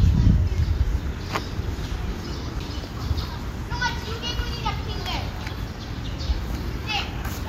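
At 2.6 s a brief tick is followed by the sound suddenly resuming from a different point, a CD skip. A knock or disc flaw threw the laser onto another turn of the spiral, so the player muted for only a few milliseconds before carrying on from there.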